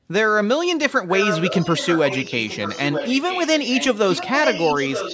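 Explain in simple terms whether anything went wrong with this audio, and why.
Something did go wrong. From 1.11 s until the end, a second copy of the speech follows the first, arriving just under a second later (about 0.93 s). That copy is only a little quieter than the original. This is an echo leak. The likely cause is that the other person had the call on a loudspeaker, and their echo canceller did not fully remove what their microphone picked up. So the speech was sent back.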